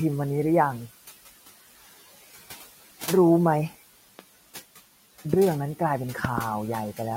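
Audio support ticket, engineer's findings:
Noise suppressor artifacts, throughout: room noise, sitting about 19 dB under the speech, dips between phrases and swells back under them. The suppressor's per-band gain cuts steady noise about 15 dB frame by frame.

Loud pop: sharp clicks at 4.19–4.21 s and 5.34–5.36 s, plus a double pop at 6.25–6.40 s, each peaking well above the speech, which carries on underneath. Likely a voltage step from a plug, switch, static or driver glitch, shaped by the downstream circuitry.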